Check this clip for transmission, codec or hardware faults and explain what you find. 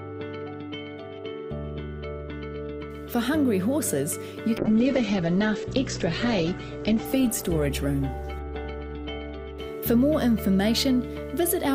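One fault: a call bitrate drop from 4.59 s to 10.39 s. The connection's bandwidth estimate collapsed, so the encoder was starved of bits, and the coarseness fits a fall from around 128 kbps to roughly 10 kbps. The audio bandwidth narrows from 20 kHz to 8 kHz, so the sound turns muffled and rough-edged, with the worst, most watery stretch lasting about 2.23 s before the bitrate recovers and the top end returns.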